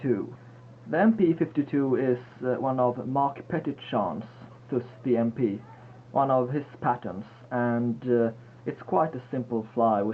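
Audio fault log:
2.26–4.26 s: jitter buffer speed-up; repeated removal of pitch-period-length slices, about 150 ms in total, makes the sound run at 107% speed with unchanged pitch.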